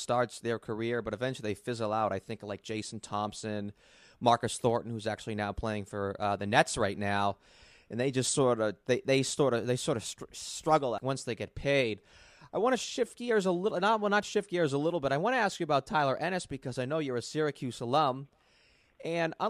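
No technical faults can be heard anywhere in the recording; the speech signal stays steady and intact throughout.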